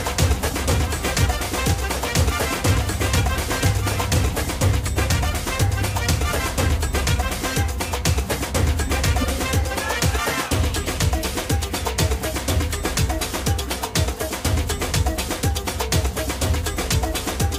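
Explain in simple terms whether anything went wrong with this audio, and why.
A doubled audio track, likely from a second, slower capture of the same sound, plays a slightly quieter copy about a second and a half late, from the start until 4.52 s.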